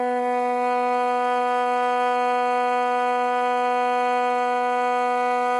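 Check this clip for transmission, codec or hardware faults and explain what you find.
There's one fault, and it runs through the whole music clip: heavy MP3 compression, most likely. Nothing sounds above about 11.3 kHz, so the top is dull. The encoder was short of bits, as at roughly 47 kbps, so it cut the treble and let weak frequency components flicker frame to frame, giving a plainly audible watery, swirly texture.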